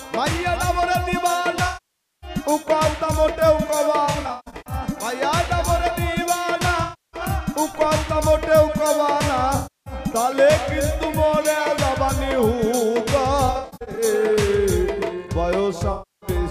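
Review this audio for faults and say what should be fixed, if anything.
AAC frame loss with concealment at 1.67–2.30, 4.06–4.73, 6.83–7.21, 9.56–9.94, 13.46–14.04 and 15.92–16.30 s. The decoder rebuilds the missing frames from the last good spectrum, which gives smeared, phasey patches rather than the hard silences of a dropout. Use forward error correction or retransmission on the transport.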